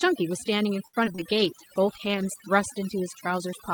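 Speech with overdone noise removal throughout. A noise reducer set too strong has pulled frequency bands near its noise estimate far down. Quiet parts of the voice vanish with them. The background sits near silence with twinkling specks. From 0.87 to 1.34 s there is repeated packet loss, heard as robotic sound. Four gaps land close together, the longest about 61 ms. Each is patched by stretching the last sound, so about a third of that span is filled-in audio. The result is choppy, with pieces missing. A call bitrate drop follows from 1.30 to 2.54 s. The sound turns coarser and duller, and the high end is cut away. It stays at its worst for about 1.2 s, which fits the encoder falling from about 40 to 16 kbps after the bandwidth estimate dropped.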